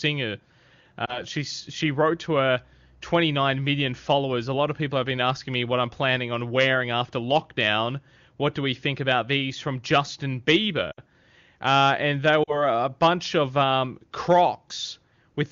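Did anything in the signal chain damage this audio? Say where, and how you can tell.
Yes, at the radio link: lost AMR speech frames. There is a brief warbly dip at 1.05–1.22 s before "she she wrote to", and the sound drops to near silence at 10.91–11.00 s and at 12.43–12.66 s between "and they" and "a bunch of um". The decoder repeats the last good frame at falling gain.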